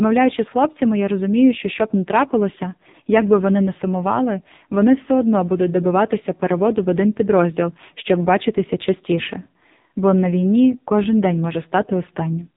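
From start to finish the speech carries the sound of AMR narrowband mobile coding, the AMR-NB codec of 2G and 3G phones. Everything above about 3.8 kHz is gone, and heavy coding damage makes the voice buzzy and synthetic, which points to a low mode near 5.9 kbps. On a spectrogram the energy stops at a flat ceiling at 3.8 kHz, and harmonics look smeared and coarse, stepping at 20 ms frame boundaries.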